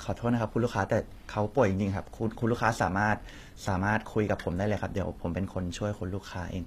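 From start to finish the treble has a synthetic, gritty quality, with s sounds turning lispy and metallic, and nothing is present above about 14.9 kHz. This is likely HE-AAC compression at a low bitrate, roughly what 24 kbps would give. The codec keeps only the lower spectrum properly coded and regenerates the top end by spectral band replication, copying lower bands upward under a coarse envelope, so harmonics above the crossover fail to line up.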